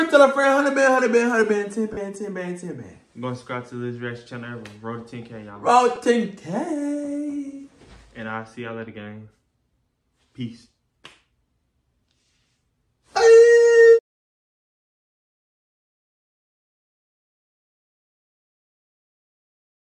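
At 1.93 to 1.97 s, and again at 5.96 s, there are lost LE Audio frames. The first gap lasts about 40 ms, which fits four 10 ms LC3 frames. The second is a single 10 ms frame. Each time, the decoder covers the hole by repeating the last spectrum with randomised phase, so tonal content briefly smears into noisy hiss instead of snapping to silence or clicking as a plain dropout would. The light codec damage elsewhere stays constant rather than arriving in these bursts.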